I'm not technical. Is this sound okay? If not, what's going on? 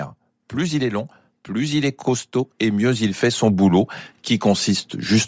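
No. The speech was likely squeezed through Bluetooth LC3 compression, which packs sound into 10 ms chunks and throws away detail to save space. The result is a breathy, grainy edge on the voice throughout, with the missing upper detail filled in by noise.

There is also automatic gain rising. The system decided the input was too quiet and kept turning itself up, from about 0.54 s to 5.23 s. The voice and the background noise swell louder together over those seconds.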